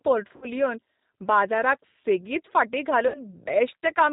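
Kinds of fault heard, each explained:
G.729 codec: Throughout the speech the sound is band-limited with nothing above 4 kHz, and it has a plainly audible rough, slightly synthetic grain. The character fits an 8 kbit/s G.729-family coder. That kind of coder does not carry the waveform itself. It rebuilds each 10 ms frame from a vocal tract filter, a pitch predictor and a handful of pulses, so fine detail is traded away for that low bitrate.
VoIP packet loss concealed by the speech codec: At 0.36 to 0.47 s and again at 3.08 to 3.21 s, about 60 ms of the stream drops out each time. The gaps sound like three packets' worth. The decoder fills each gap by extending its last pitch and filter at falling gain, so the speech smears into a buzzy tone or coloured noise that fades. Each frame depends on the one before it, so the speech stays weak or distorted briefly after the packets resume.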